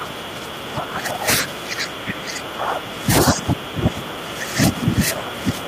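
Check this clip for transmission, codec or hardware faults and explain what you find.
Two faults are present in this speech clip, one from the playback hardware path and one from echo cancellation.

Buffer tearing runs through the whole clip, heard as a steady robotic buzz at 25 Hz that rides on the speech and vanishes in pauses. The write and read positions in the playback ring buffer have drifted until they cross inside each period, which repeats every 40 ms and so fits a buffer of roughly that length. A small slice of each period, something like a fourteenth, plays audio left from an earlier lap, around 70 ms old, with a hard join at each end. That repeating discontinuity is the rattle.

Speech suppressed in double talk affects the whole clip, from 0.0 s to 5.68 s. The speech dips in level, at its deepest by around 20 dB. The likely cause is an echo canceller that could not tell the near talker from loudspeaker echo while both sides spoke at once, so it pulled the level down on both.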